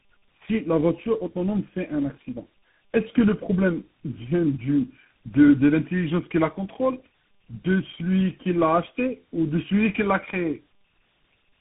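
Tandem speech coding throughout: the sound fits three narrowband speech coders in a row, likely ending in CVSD, each recoding the last one's output, leaving rough, warbly speech with nothing above 3.8 kHz.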